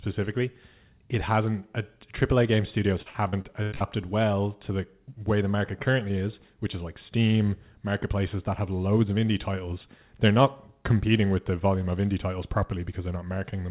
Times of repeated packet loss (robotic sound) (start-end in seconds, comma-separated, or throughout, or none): 3.02-3.83